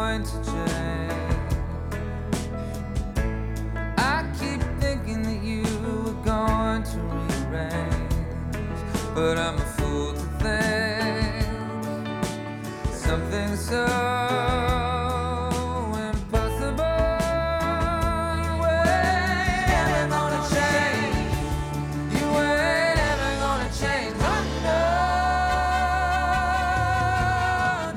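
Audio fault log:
18.33 to 22.97 s, doubled audio track: a full-band copy of the sound trails the original by about a fifth of a second, roughly 5 dB quieter, with no decay or room colour, and it starts and stops abruptly, likely a second capture path or an edit holding two copies out of step.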